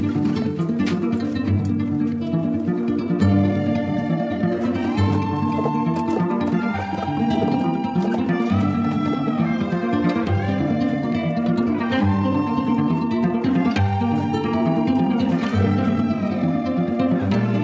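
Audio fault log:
Nothing stood out on listening; the sound carries the usual narrowed range of call microphone processing, with nothing above 8 kHz, and no event in it drew attention.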